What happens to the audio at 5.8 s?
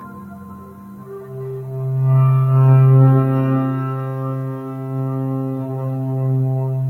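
At 5.8 s, as throughout the music, a speech noise suppressor treats sustained tones and tails as noise, cutting them by around 10 dB, so held sound pumps and thins.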